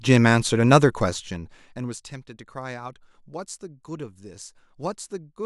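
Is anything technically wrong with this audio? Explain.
No, nothing in this speech recording shows a technical fault.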